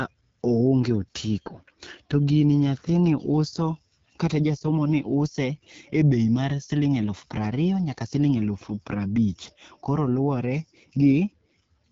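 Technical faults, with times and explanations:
Throughout: AMR wideband (HD Voice) codec. The speech sounds rough and raspy, with plainly audible coding damage. It fits one of the two lowest AMR-WB rates, about 8.85 kbit/s. A pulse-driven vocal tract model can't track the voice closely here. Nothing remains above 7.3 kHz.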